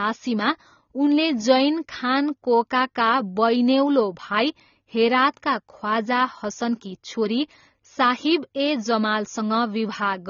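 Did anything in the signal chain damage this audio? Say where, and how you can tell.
Yes, at the codec stage. Throughout the speech the top end stops sharply near 6.9 kHz and the codec damage is plainly audible, which points to AAC compression, likely AAC-LC at a low bitrate of around 24 kbps. The encoder is short of bits, so it discards high frequencies and quantises the rest coarsely, leaving a dull, smeared texture. A plain low-pass filter would also remove the top but leave the remaining band clean rather than degraded.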